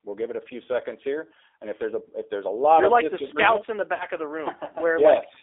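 From start to finish the speech carries the G.729 codec's plainly audible damage: a narrow line band of about 300 Hz to 3.6 kHz and a rough, synthetic grain, which fits an 8 kbit/s model-based coder rather than the smeared, swirly artefacts of a perceptual codec.

From 3.94 to 4.06 s, VoIP packet loss concealed by the speech codec covers 60 ms of missing audio, which fits three lost packets. The decoder stretches the last sound into a fading buzzy tone or coloured noise instead of leaving a silent gap or a click, and the speech stays weak briefly after the stream resumes.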